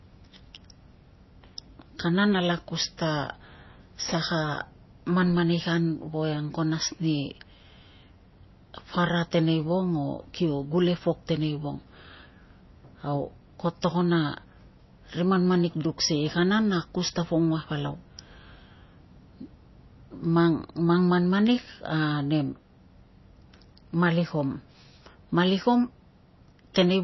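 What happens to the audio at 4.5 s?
At 4.5 s the speech, like the whole clip, has nothing above 5.8 kHz and a watery, swirling texture from weak frequency lines flickering between frames. This points to MP3 compression at a low bitrate, likely around 24 kbps. A plain low-pass filter would dull the treble without that swirl.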